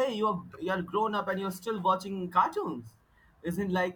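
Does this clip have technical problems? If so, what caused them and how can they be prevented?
No, nothing in this speech clip registers as a technical fault, so there is nothing to trace or prevent.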